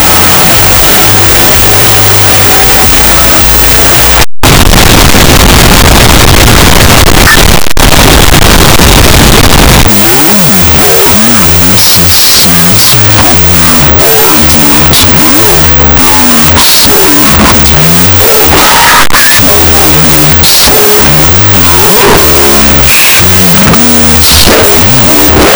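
From start to finish the audio has a wrong sample width fault: 16-bit integer data read as unsigned 8-bit. Each sample splits into two byte values, so playback runs at half speed, an octave low, with loud noise from the low bytes burying the original.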